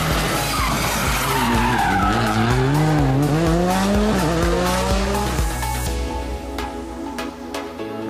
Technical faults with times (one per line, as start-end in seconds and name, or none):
none